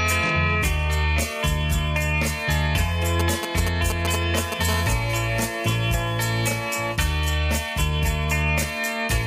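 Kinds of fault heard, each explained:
GSM signalling bursts: a nearby 2G phone's radio bursts, rectified by the audio circuit, giving galloping ticks and short 217 Hz buzzes from 3.2 to 4.63 s, fairly loud.
GSM phone buzz: a phone in a call transmitting 217 bursts per second, rectified into a steady, raspy 217 Hz buzz from 4.69 to 6.96 s, about 17 dB below the signal.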